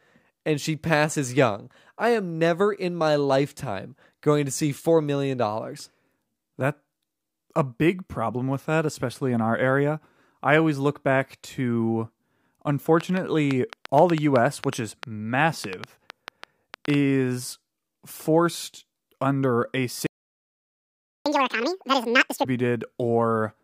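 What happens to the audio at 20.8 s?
A playback stall runs from 20.07 to 21.26 s: the speech cuts out for about 1.2 s, likely because the player ran short of data, then resumes.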